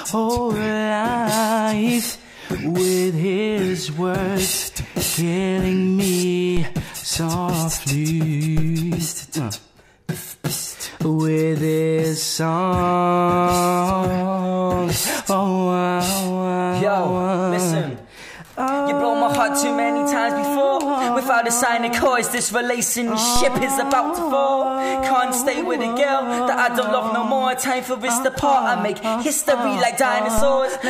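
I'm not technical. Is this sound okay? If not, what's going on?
No. There are low thumps at 6.57, 8.58, 23.36 and 30.38 seconds. Each is a DC step: the waveform's resting level suddenly jumps, then drifts back.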